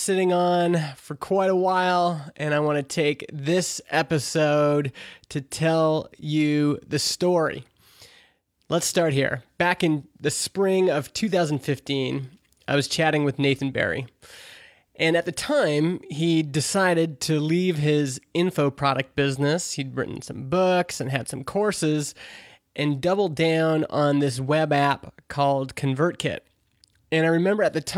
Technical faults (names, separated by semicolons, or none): none